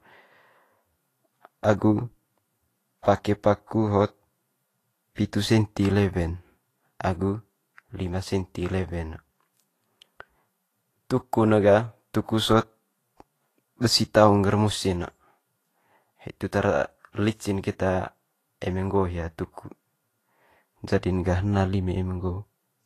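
Throughout the clip, the speech has likely passed through Vorbis compression at a low setting, consistent with a rate near 31 kbps. Content above 14.2 kHz is gone, and the coarsely quantised treble turns into hiss, leaving consonants grainy and onsets smeared.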